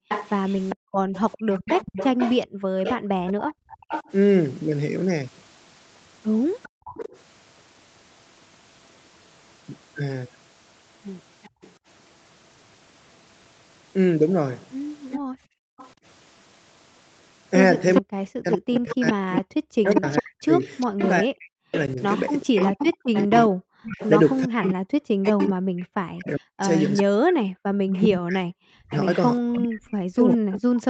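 From 0.0 to 6.84 s the background is gated by the echo canceller. While the far end plays, the canceller clamps the microphone, so the room tone drops by up to about 40 dB for around a second and a half in total. On a waveform the noise floor collapses to near-flat gaps, and on a spectrogram the broadband haze vanishes in short blocks.

From 0.09 to 7.19 s, an echo leak lets a copy of the sound return 402 ms late, roughly 10 dB under the direct speech. It likely comes from an echo canceller that failed to subtract all of the loudspeaker pickup. A spectrogram shows each syllable pattern repeated about 0.4 s later as a fainter ghost. The leak recurs very faintly, around 30 dB down, from 11.43 to 11.72 s. Within it, from 11.5 to 11.61 s, the background dips by about 25 dB for roughly 0.1 s. The stronger echo returns from 15.11 to 30.37 s, and between 15.19 and 15.78 s the room tone again gates down by up to about 40 dB for about half a second.

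From 18.01 s to the end, speech is suppressed in double talk. With both sides active, the canceller likely mistook the local talker for echo and attenuated it by as much as about 40 dB. The result is chopped, dipping speech. It shows as notched envelope gaps and high-frequency bands that fade out in patches. Across the whole clip, nothing appears above 8 kHz, consistent with the call path's bandwidth limit.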